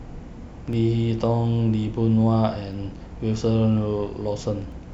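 From 0.73 s to about 4.72 s there's a periodic USB or driver dropout, with a hiccup every 2.0 s, so roughly three in all. Each time, something blocks the USB bus or audio driver long enough to lose around a millisecond of the speech, and that gap gets filled with silence. It's far too short to hear as a gap. You get a crisp little tick or pop landing on a steady two-second beat.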